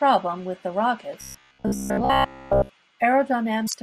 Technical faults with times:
1.21-2.69 robotic sound from repeated short buffers
3.64-3.74 damaged data in a compressed stream

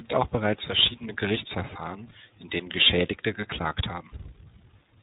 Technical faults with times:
0.00-5.03 tandem speech coding

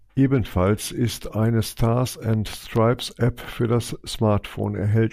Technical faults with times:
2.33-3.54 train of clicks

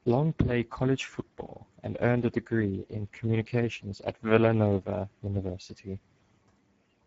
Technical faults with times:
0.00-7.06 Speex codec

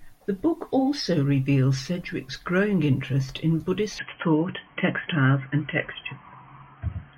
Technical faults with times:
3.99-7.18 input switched to a poorer device

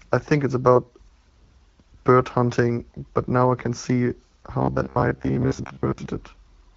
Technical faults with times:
4.62-6.06 robotic sound from repeated short buffers

